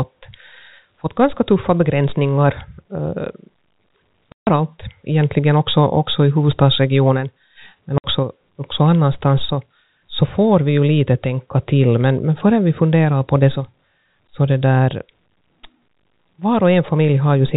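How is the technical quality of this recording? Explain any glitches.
The speech is narrowband, cut off near 4 kHz as on a G.711 telephone line, and it has two dropouts. At 4.32 to 4.47 s, just before "egentligen också också i", and at 7.98 to 8.04 s, between "också i huvudstadsregionen men" and "också annanstans så så", the sound vanishes for 150 ms and 60 ms with hard edges. This is packet loss filled with silence: lost packets, which fit 30 ms packets, were replaced by abrupt digital silence.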